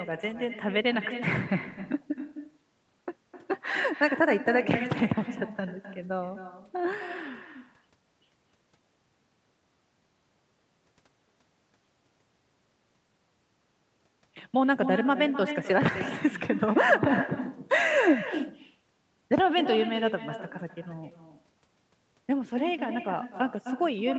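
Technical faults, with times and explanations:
Throughout: echo with no canceller. Every phrase of the speech is trailed by a second, fainter copy arriving roughly a third of a second later, about 10 dB below the direct sound, with a thinner character. The far end is playing the call through a loudspeaker that its microphone picks up again, and nothing cancels it, so the speech returns after the network round trip. The audio also tops out near 8 kHz, consistent with a wideband call codec.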